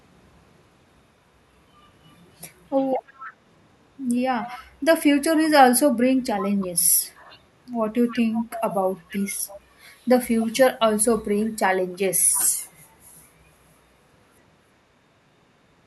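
Echo leak at 3.07–3.33, 4.44–4.62, 6.4–7.4, 8.08–9.6 and 11.4–12.71 s: a faint copy of the speech returns 328 ms late, about 15 to 20 dB down. It is likely a loudspeaker's echo canceller passing its pickup back. Unlike reverberation, it is a distinct delayed repeat, not a smooth decaying tail.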